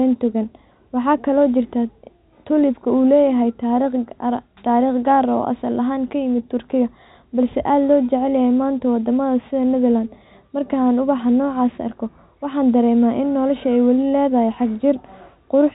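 No technical faults detected.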